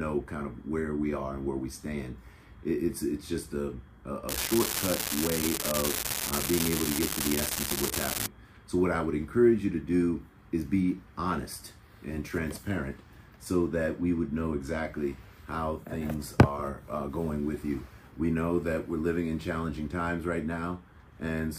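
An unreliable data bit runs from 4.29 to 8.26 s. One marginal data line flips its bit in a random share of samples, each error adding a spike of identical size, about -9 dBFS. The result is a steady crackle or fizz that continues through pauses.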